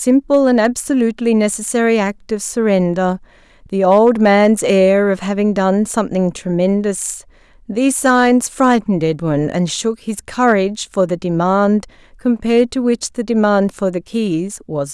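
Hard clipping occurs in five bursts: 0.09 to 0.66 s, 3.90 to 4.84 s, 8.05 to 8.75 s, 10.44 to 10.52 s, and 12.57 to 12.61 s. In each, the speech peaks exceed what the signal path can pass by about 2 to 3 dB, so their tops are sheared flat. Those flat sections generate high harmonics, heard as a brittle crackle riding on the loudest syllables rather than a continuous fuzz.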